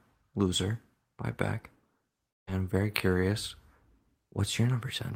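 At 2.29 s the speech is interrupted by what is likely a long network dropout: packets stopped arriving for about 0.2 s, and the receiver had nothing to play. It extends the last sound as a decaying buzz or hiss for roughly 0.18 s, and near-silence follows, holding until 2.49 s. The speech then returns on "I'm very curious", with about 180 ms of the original audio missing from the stream.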